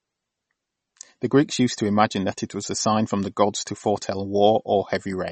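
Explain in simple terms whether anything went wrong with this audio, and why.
Something did go wrong. The whole clip has the watery, swirly quality and smeared edges of heavy MP3 compression, likely from squeezing it too hard. Everything above about 8.4 kHz is gone, so the s sounds lose their crispness and the speech sounds dull from start to finish.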